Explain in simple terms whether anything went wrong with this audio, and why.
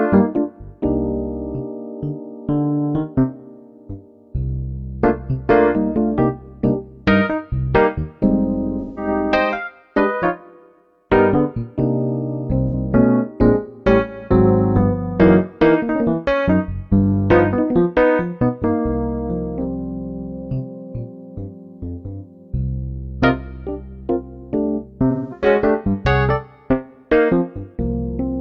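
Three brief gaps come from AAC frame loss with concealment, at 8.80 to 9.08, 12.68 to 12.74 and 25.10 to 25.46 seconds. Chunks of the compressed stream went missing. The player guessed the missing sound from what came just before, so each spot sounds like a smeared, noisy or phasey patch.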